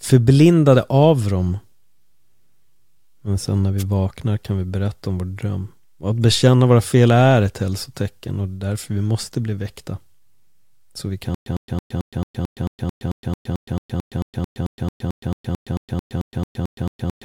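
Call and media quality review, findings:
Wireless microphone noise hit, 3.78–3.83 s: analogue FM radio link faded as reflections cancelled, receiver noise rose, brief static swish of about 50 ms laid over the speech.

Stutter with silent gaps, 11.35 s to end: player or stream likely stalled, replaying its last fragment on each retry. A 104 ms burst recurs every 221 ms with 117 ms digital silence between, 26 times. Intended audio lost.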